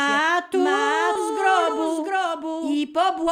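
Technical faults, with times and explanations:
Throughout: doubled audio track, a second full-band copy roughly 700 ms behind and about 5 dB quieter, likely from a second, slower capture path.
1.15 s: skip ahead, playback jumps forward with no gap, about 700 ms of audio dropped while later audio was waiting, joined almost directly.
1.29 to 2.56 s and 3.01 to 3.32 s: jitter buffer speed-up, sound runs hurried at unchanged pitch, 7% then 14% faster, as short pitch-period pieces are cut to reduce buffered delay.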